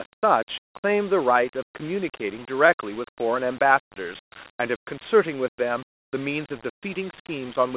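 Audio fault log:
The speech signal shows no technical faults, and its narrow, low-resolution character is consistent with linear 8-bit coding at an 8 kHz rate working as intended.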